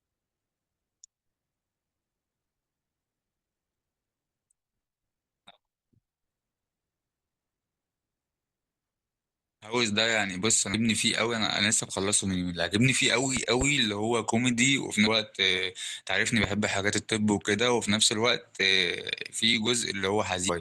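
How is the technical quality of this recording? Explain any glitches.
The speech recording has three short glitches in its second half.

At 10.73 s, damaged data in the compressed stream makes the decoder lose frame sync, giving a brief glitch.

Loud pops follow, likely from a switching or static voltage spike. Between 13.37 and 13.64 s there is a double pop about 10 dB above the speech. At 16.44 s a single louder pop reaches about 15 dB above it. The speech continues underneath both.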